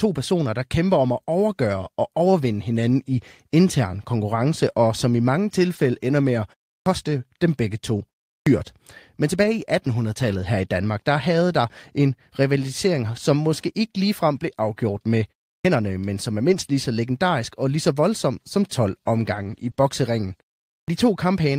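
At 5.75 to 5.85 s the speech turns briefly rougher and grainier for about 60 ms without any gap. This is a lost packet rebuilt from error correction: the following packets carried a low-bitrate copy, and the decoder played that coarser copy instead. The same roughening returns at 9.43 to 9.45 s (about 20 ms), 10.23 to 10.45 s (about 120 ms), 16.51 to 16.69 s (about 100 ms) and 19.35 to 19.69 s (about 180 ms).

At 6.80 s the speech starts abruptly, its first sounds missing. It is a clipped start after a pause: after 0.34 s of silence the output device had dozed and needed about 62 ms to wake, swallowing that opening. It recurs at 8.40 s (65 ms lost after 0.37 s), 15.58 s (67 ms after 0.33 s) and 20.81 s (71 ms after 0.48 s).

Right after the longest rebuilt stretch, at 19.71 to 19.75 s and again at 19.75 to 19.79 s, a quick smear or wobble appears. This is short concealed packet loss: 20 ms pieces arrived too late, so the receiver extended the preceding sound to fill each hole before blending back.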